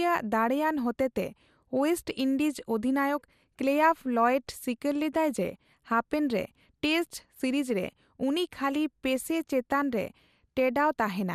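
A speech recording with plainly audible MP2 compression throughout: the top end sounds dull, and a gurgling, granular texture sits on the voice, most likely from MPEG Layer II coding at around 80 kbps. At that rate the upper sub-bands are starved of bits and switched off, and the remaining ones are coarsely quantised. Unlike MP3 artefacts, the damage is not a swirling, metallic smear. It is a band-limited graininess where the high band flickers as whole sub-bands drop in and out. Two short bursts of DAB burbling also cut in. The first runs from 7.56 to 7.66 s, just after "ᱨᱮ ᱴᱮᱥᱴ", and the second from 9.39 to 9.48 s. Each lasts under a tenth of a second, which fits roughly three corrupted MP2 frames. A small fraction of bit errors slipped past error correction, and the wrong samples put short blips of noise into individual sub-bands, producing a brief burble. This differs from a dropout or click: the sound never goes silent and there is no single sharp transient, just a momentary burble laid over the speech.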